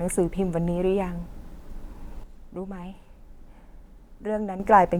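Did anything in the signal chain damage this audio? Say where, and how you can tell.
Yes. From 2.24 s to 4.60 s, speech and background noise drop together by about 9 dB: a sudden gain jump, likely an unramped digital gain change.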